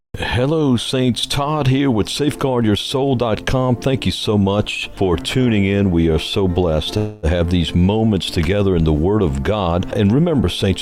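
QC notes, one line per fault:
6.97–7.26 s, call audio freeze: the last sound stretches into a fading buzz for about 255 ms, likely because delayed packets emptied the jitter buffer. Unlike a dropout, it never reaches silence, nothing is skipped, and everything afterwards plays about 255 ms late.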